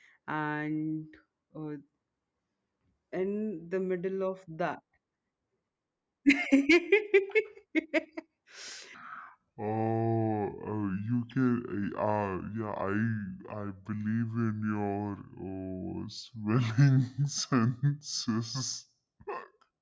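From 8.94 s to the end of the clip, the speech suffers a wrong sample rate fault. The samples are clocked out at a lower rate than they were captured at, with no resampling, which fits 24 kHz material being played at 16 kHz. Everything stretches by the same ratio: the speech runs at about two-thirds speed and drops roughly 7 semitones, so voices come out low, slow and drawn out.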